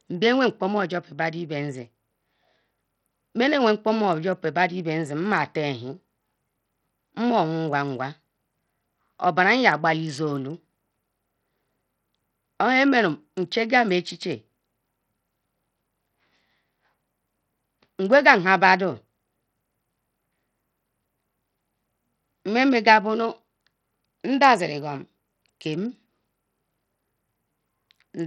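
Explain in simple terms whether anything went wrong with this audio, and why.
From start to finish, the speech has a gritty, flickering top end with nothing above about 16.5 kHz, likely from heavy Bluetooth SBC compression rather than simple, clean muffling.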